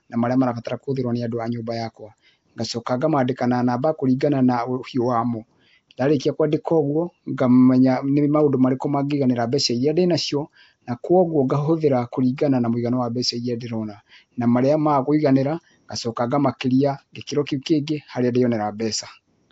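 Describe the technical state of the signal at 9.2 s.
At 9.2 s the speech carries a rough, hissy halo and a smeared, underwater quality, with nothing above 7.7 kHz, and this damage runs through the whole clip rather than this moment alone. The likely cause is Nellymoser compression: the Flash-era Asao codec codes short blocks at a fixed, very low bit depth, starves weaker bands entirely and fills them with noise. The plainly audible damage fits a bitrate around 32 kbps.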